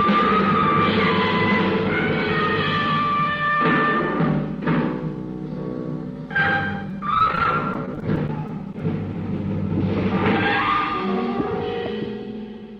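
Repeated packet loss runs from 6.89 to 8.80 s: packets go missing again and again, a couple of dozen brief holes, none much longer than 18 ms, each patched by stretching the preceding sound. About a seventh of that stretch is filled in this way, so the audio turns choppy and robotic.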